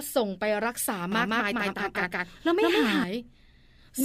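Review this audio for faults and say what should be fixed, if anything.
From 1.12 to 3.04 s the speech repeats as an equally loud copy about 150 ms late: a doubled audio track, likely a slower second capture. Record through a single capture path so the speech is never mixed in twice.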